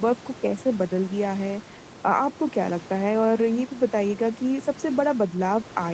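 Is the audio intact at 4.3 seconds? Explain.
Yes, the speech at 4.3 seconds is intact, with nothing there beyond the ordinary band-limited sound of a call line and a low room noise well beneath the voice.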